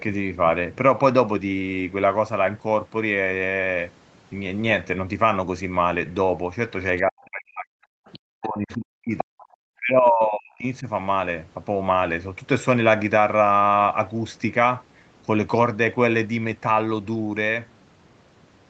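From 6.97 to 7.02 s, faint traces of the other side's voice leak through at about 35 dB below the talker. This is likely residual echo: the far end played on the device's loudspeaker, reached the microphone, and was not fully removed by the echo canceller. Two more brief leaks follow, at 8.06 to 8.19 s at about 25 dB down and at 9.4 to 9.46 s at about 30 dB down. Each is a short scrap of a second voice behind the talker.

The talker's speech is suppressed in double talk from 7.03 to 7.9 s, from 8.15 to 9.38 s and from 9.78 to 10.87 s. Each dip reaches a depth of around 40 dB and affects roughly a second of audio in total. This likely happens because both sides were talking at once, and the canceller could not separate the local voice from the loudspeaker echo, so it attenuated everything. The speech sinks sharply during these stretches, while the leaked echo fragments sit at their edges.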